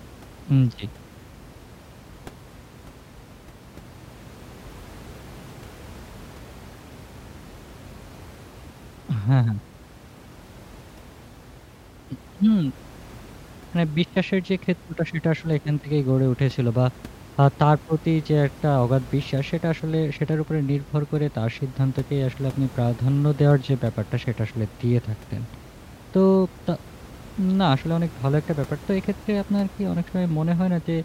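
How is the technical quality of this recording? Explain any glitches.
The recording has no glitches, with only room noise sitting about 21 dB below the speech.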